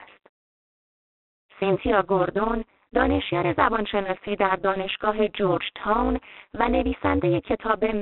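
A harsh, rasping hiss rides on this speech recording from start to finish, rising and falling with the level of the talking, and the sound is boxed into a narrow telephone band with nothing above about 3.4 kHz. This is G.726 ADPCM coding. Each sample is sent as a few bits describing its difference from an adaptive prediction, and the coarse steps leave noise that tracks the signal. The amount of rasp points to the 24 kbit/s rate rather than the 32 kbit/s used by DECT phones. The clip also has a metallic buzz throughout, with extra tones around the voice, from a ripple at around 200 Hz with deep dips of about 60 dB. That is overlap-add ripple. The audio was split into windowed frames and rejoined with an overlap whose windows do not sum to a constant gain, so the level swells and collapses once per frame. At this frame rate the modulation fuses into a gritty roughness laid over the speech.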